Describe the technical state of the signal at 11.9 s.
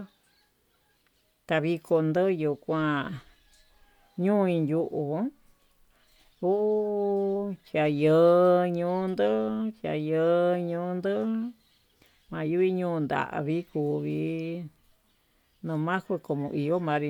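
At 11.9 s the speech signal is intact, with no technical fault present at that moment.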